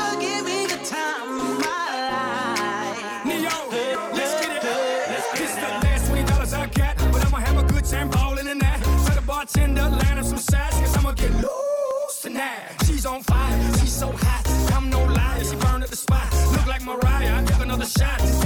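You get a little click or skip at 3.95, 7.93, 11.91, and 15.90 to 15.92 s, roughly every 4 s. That's overlap between stream segments: the player trims 8 to 20 milliseconds where segment timestamps collide, so the waveform jumps at each boundary.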